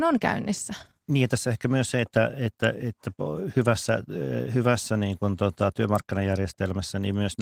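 No technical faults can be heard in this recording.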